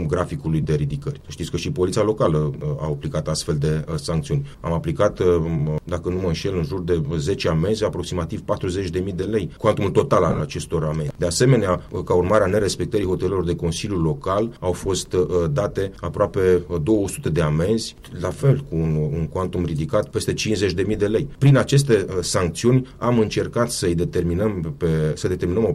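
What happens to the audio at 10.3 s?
Lost LE Audio frames occur from 10.29 to 10.40 s. Gaps totalling 75 ms are scattered across 105 ms, with the longest run about 30 ms. That pattern fits around ten dropped Bluetooth LE Audio frames. For each gap, the LC3 decoder fills in by repeating the last good spectrum with randomised signs. Any tonal content turns into a brief, noisy smear. The sound loses definition in short, rough patches before clean decoding resumes.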